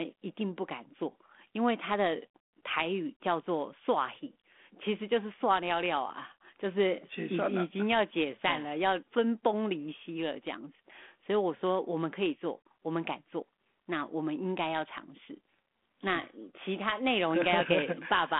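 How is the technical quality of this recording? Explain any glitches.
No glitches turn up anywhere in the recording. The speech comes through a G.726 ADPCM telephone path at 32 kbit/s, so it sits within a line band of about 200 Hz to 3.5 kHz with nothing above 3.8 kHz, and the coding leaves only a light grain on it.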